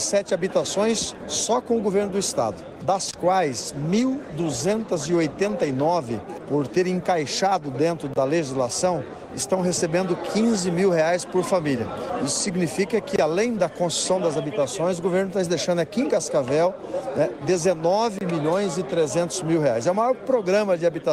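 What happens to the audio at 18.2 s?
At 18.19 s the sound drops out abruptly and comes back at 18.21 s, a hole of about 25 ms with hard edges on both sides. This is a gap between chunks. The audio was delivered in 5-second chunks, and at this join silence was inserted between one chunk and the next, for example from codec padding or a player starting the next chunk late. No sound is lost, but it is briefly interrupted.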